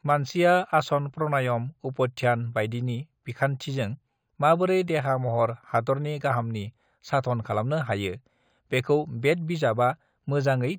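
Throughout, the speech sounds dulled with a faint metallic shimmer on sibilants. This is imaging from linear upsampling, with mirrored content between 5.5 and 11 kHz, roughly 30 dB down.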